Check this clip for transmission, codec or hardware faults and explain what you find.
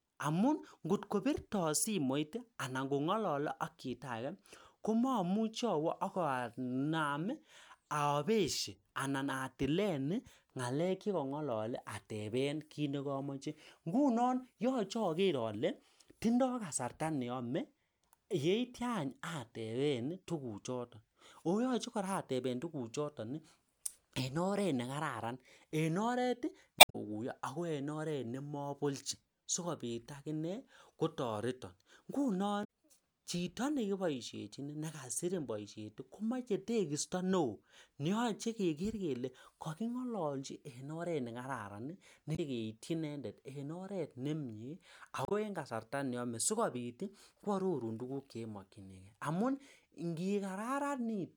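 The speech is interrupted four times by short codec glitches. At 26.76–26.95 s, 32.61–32.65 s, 42.35–42.39 s and 45.25–45.32 s, a brief chirp or blip breaks into the audio. These come from damaged data in a compressed stream: corrupted bytes make the decoder misread frames, lose sync and hunt for the next valid frame header.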